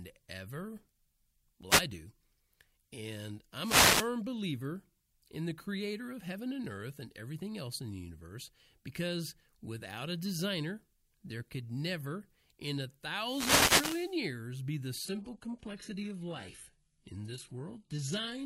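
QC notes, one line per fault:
1.69–1.82 s, 3.60–4.10 s and 13.16–14.21 s, wireless microphone noise hit: the analogue FM radio link faded three times as reflected signals cancelled at the receiver, so its noise floor rose. Each hit is a brief swish of static. The first is a short flick, and the last lasts just over a second.
15.05–18.46 s, adaptive stream at a lower bitrate: the connection slowed and the player switched to a much lower-bitrate rendition for the rest of the clip. The quality drop is sudden, with no gap. Nothing above 11.5 kHz survives, and the upper speech band turns thin with codec artefacts. This fits a change from about 96 kbit/s AAC to a roughly 12 kbit/s HE-AAC stream.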